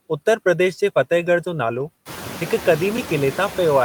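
Throughout the clip, noise suppressor artifacts are present. The suppressor lowers the bands it judges to be steady noise by only about 3 dB, so the residual floor dips slightly between phrases and swells under them. On a spectrogram the background looks faintly mottled from frame to frame rather than smooth.

From 0.44 to 0.46 s, just before "प्रदेश जे फतेहगढ़", an underrun with held sample occurs. The output ran dry and the converter held its last value for 20 ms. The waveform shows a flat line, and about 20 ms of live audio was lost during the gap.

At 1.45 s, right after "प्रदेश जे फतेहगढ़", the same underrun recurs for 10 ms, giving a brief flat step.

From 1.75 to 1.81 s, a lost packet rebuilt from error correction fills the gap. This points to two lost packets, about 40 ms in all, rebuilt from low-bitrate copies. It sounds rough and hissy.

At 2.97 s, another 10 ms held-sample underrun leaves a short flat segment. 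By this point the room noise, which rises by about 16 dB near 2 s, sits about 15 dB below the speech.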